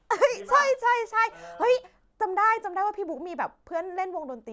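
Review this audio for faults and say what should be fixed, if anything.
Nothing here needs fixing; I didn't hear any faults in the speech.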